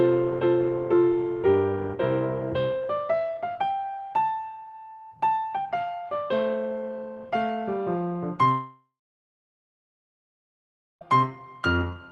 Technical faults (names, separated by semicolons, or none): long network dropout